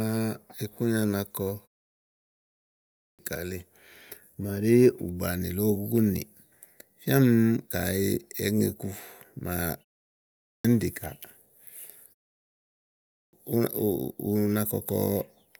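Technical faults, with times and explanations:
2.75–3.19 s, 10.2–10.65 s and 12.87–13.33 s, clipped start after a pause: each time speech resumes after a gap (1.16 s, 0.44 s and 0.81 s), the opening 0.44 to 0.46 s is swallowed and the speech begins abruptly, already underway. The output path sleeps during silence and is slow to wake. Muted pauses differ: there the background drops out during gaps, but it returns in time and no speech is lost.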